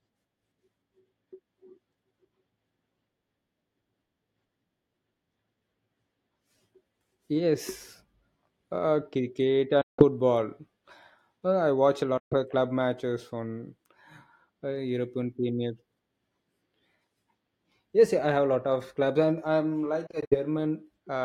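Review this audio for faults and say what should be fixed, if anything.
The speech cuts to silence at 9.81–10.04 s and 12.17–12.34 s, with broken gaps across 20.07–20.36 s. Likely a Bluetooth dropout: late packets were discarded, and sound resumes further on. Keep the source near the headphones, away from obstructions and competing 2.4 GHz traffic.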